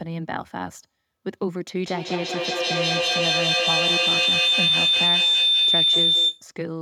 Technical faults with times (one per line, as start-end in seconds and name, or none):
1.83-6.50 feedback howl